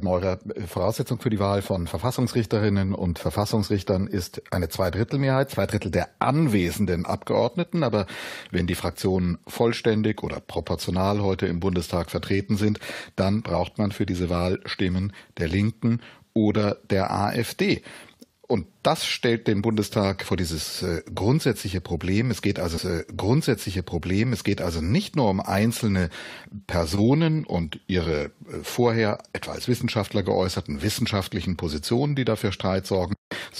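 At 22.77 s a small blip jumps the sound back, and about 2 s replays until 24.79 s: a stream segment repeated, fetched or queued twice by the player.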